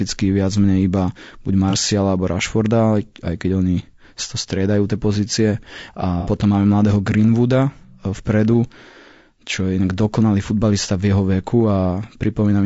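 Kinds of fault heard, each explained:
Low-delay AAC compression: The speech was likely encoded with AAC-ELD, whose short frames resolve pitch harmonics poorly and use bits inefficiently. At a rate that fits about 32 kbps, the damage is plainly audible: the voice sounds rough and grainy, with noise between harmonics and a synthetic top band.
AAC frame loss with concealment: Frames went missing and the decoder rebuilt them from the last good spectrum. Brief smeared, noisy patches result, one near 1.70 to 1.75 s, consistent with a single lost frame, and a longer one near 6.20 to 6.28 s, fitting two.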